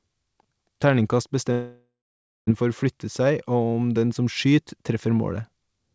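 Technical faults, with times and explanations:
1.52–2.50 s, long network dropout. The sound turns into a fading buzz, then leaves about 0.56 s of near silence. Audio resumes at 2.50 s with nearly a second missing. The likely cause is lost packets, with the receiver stretching the last sound to fill the gap.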